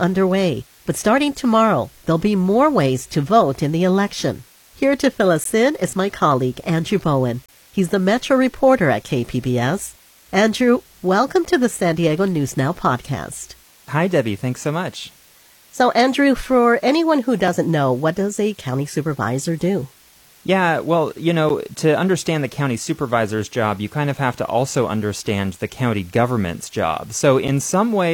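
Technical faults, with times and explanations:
Throughout: low bit depth with dither. A constant, even hiss sits roughly 30 dB below the speech, with no distortion. The level points to about 8-bit audio, with dither added before rounding so the error becomes steady white noise.
5.44, 7.46 to 7.49, 11.45, 17.48, 21.49 and 27.48 s: gap between stream segments. Brief hard-edged silences of about 5 to 27 ms cut into the speech, for example between "to fill" and "in is my colleague" and between "well you" and "to understand". They fall on 2-second segment boundaries, where mismatched timestamps leave holes the player fills with silence.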